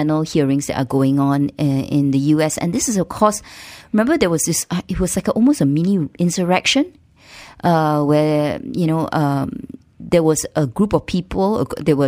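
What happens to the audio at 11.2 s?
At 11.2 s the clip shows imaging from linear upsampling, which runs through the whole recording. The speech band is dulled toward its top near 12 kHz, which fits a 24 kHz source raised to 44.1 kHz by straight-line interpolation. That weak filter leaves a mirrored copy of the spectrum between 12 and 24 kHz, about 30 dB below the signal, heard as a metallic shimmer on sibilants. Unlike aliasing, the extra energy sits above the original band as a reflection rather than folding down into it.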